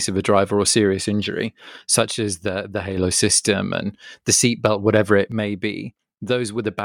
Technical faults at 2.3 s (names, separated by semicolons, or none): one channel drops out